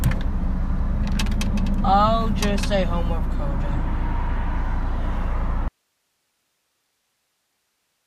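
An audio dropout to a faint residue starts at 5.68 s and runs to the end: the sound cuts out abruptly, leaving only hiss roughly 50 dB below the signal. The likely cause is the source being lost while the downstream path stayed live.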